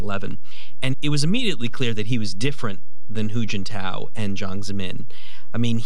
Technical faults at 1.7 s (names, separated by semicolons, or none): DC offset